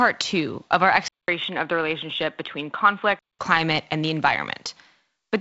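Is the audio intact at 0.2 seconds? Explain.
Yes, the speech at 0.2 seconds is intact, with no fault at that moment beyond the light band-limited character of its G.722 wideband coding.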